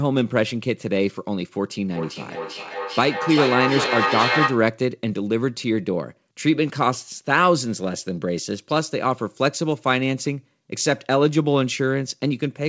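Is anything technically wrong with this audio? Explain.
Yes. From 1.95 to 4.75 s there is feedback echo between two devices. A second device in the room replays the call, and the first microphone picks it up again, beyond the reach of its own echo canceller. The speech returns roughly every 0.4 s, peaking at about 2 dB below the direct speech.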